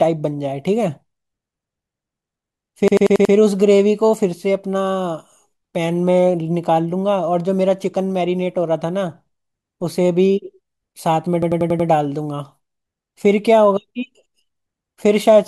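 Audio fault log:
2.88–3.34 s and 11.42–11.89 s, system hang loop: each time a machine-gun stutter breaks into the speech, with one fragment of about 93 ms repeated exactly five times at 10.8 Hz. The system stalled while the sound hardware kept replaying the same ring buffer. The loop length fits a 4096-sample buffer, and a block that long is heard as a rapid rattle rather than a steady buzz. Little or no audio is missing.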